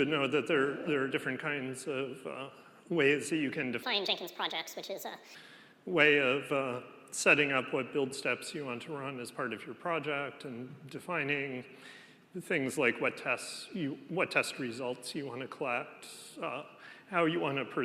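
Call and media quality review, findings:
Wrong sample rate, 3.83 to 5.35 s. Sound runs 1.5 times fast, pitch raised about 7 semitones, both shifting together. Playback path likely skipped resampling. The ratio fits 32 kHz material clocked out at 48 kHz.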